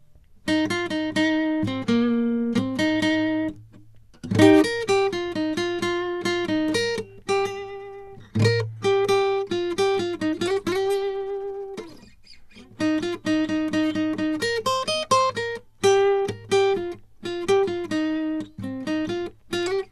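The music carries plainly audible MP2 compression throughout: nothing remains above 12.1 kHz, leaving it dull, and the remaining sub-bands sound coarsely quantised with a gurgling, granular texture. This is likely MPEG Layer II encoding starved of bits, which fits roughly 80 kbps.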